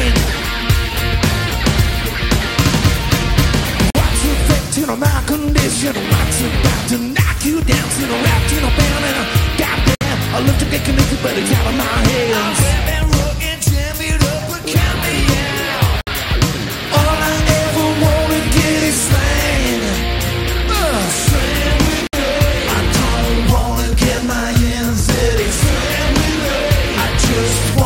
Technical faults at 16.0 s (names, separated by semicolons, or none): gap at a join of encoded pieces